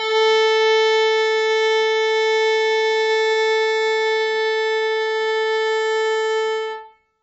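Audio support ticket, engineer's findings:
Dull, smeared music throughout, nothing above 7.7 kHz, warbly fizzy texture on sustained sounds. Likely AAC compression, heavy damage, which fits a very low bitrate starving the spectrum.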